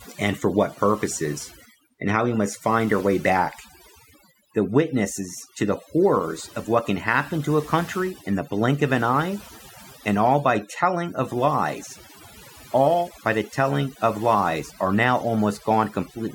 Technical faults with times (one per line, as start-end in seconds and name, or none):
0.00-16.35 overdone noise removal